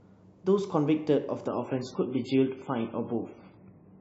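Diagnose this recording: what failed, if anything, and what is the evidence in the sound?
Network stage: adaptive stream at a lower bitrate. At 1.48 s the speech abruptly turns watery, with no gap. This fits a drop to 16 kbit/s MP3.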